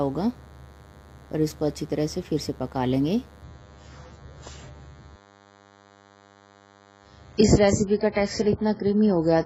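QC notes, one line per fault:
throughout, DECT cordless phone buzz: a steady, thin buzz sits under the whole clip, rich in harmonics and pitched at 100 Hz, roughly 30 dB below the programme. A DECT handset or base nearby transmits a short radio burst every 10 ms. The audio circuitry rectifies those bursts into a pulse train at the same rate, so the interference comes through as a fixed buzz and not as random noise.
3.43–9.46 s, adaptive stream at a lower bitrate: from 3.43 s to the end, the treble falls away abruptly and the sound turns dull, with nothing above 7.7 kHz and codec artefacts rising. The change has no gap, which fits the player switching to a much lower-bitrate rendition, around 16 kbit/s AAC down from 96 kbit/s, when the connection slowed. At that rate the encoder discards high frequencies and quantises the rest coarsely.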